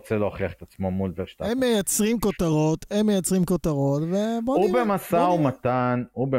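No dropouts, distortion or other technical faults can be heard anywhere in the speech.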